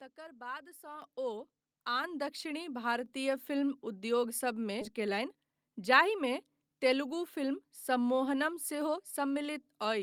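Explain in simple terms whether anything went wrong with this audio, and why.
A couple of things go wrong here, and you can hear each one.

First, the level jumps twice: at 1.02 s and again at 2.04 s the speech and the background both get suddenly louder in a single step. That's the microphone volume stepped up. The call software decided the mic was too quiet and turned up the input volume all at once rather than easing it in, so everything it picks up jumps together, the second time a bit more gently than the first.

Then at 4.81 s there's a skip ahead. Roughly half a second of speech just isn't there, and the audio on either side is stitched together with no gap. That happens when a chunk gets dropped, either in transit or by the receiver's jitter buffer clearing out an overflow while later audio is already queued, so playback jumps straight forward.

Right after that, from 4.93 s to 5.98 s, you get a jitter buffer speed-up. 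The talking runs about 9% fast but the pitch stays the same, so it comes across as hurried rather than squeaky. The buffer was holding more audio than it wanted, so it trimmed lots of tiny slivers, each one or a few pitch cycles long, adding up to roughly a tenth of a second, to pull the delay back down.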